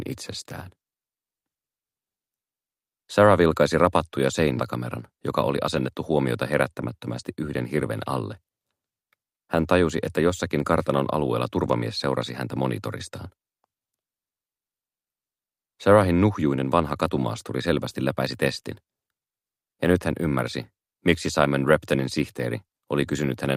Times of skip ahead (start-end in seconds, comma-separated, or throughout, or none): 4.57